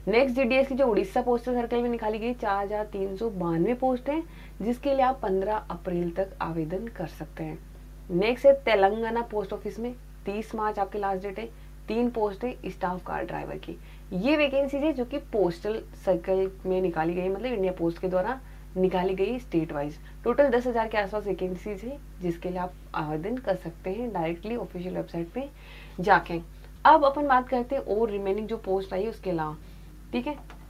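No technical faults are audible.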